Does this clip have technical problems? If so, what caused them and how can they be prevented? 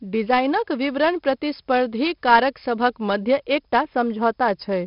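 Yes. 4-bit ADPCM compression runs throughout: coarse 4-bit prediction steps add gritty, level-following hiss and smeared attacks, with nothing above 5.3 kHz, which fits about 44 kbps. Prevent it by recording and storing uncompressed PCM.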